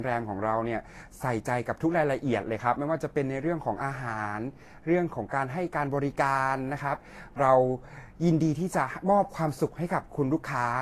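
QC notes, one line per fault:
Throughout, transcoding between lossy codecs: nothing above 14 kHz and two kinds of artefacts stacked, likely a low-bitrate Vorbis pass re-encoded to AAC.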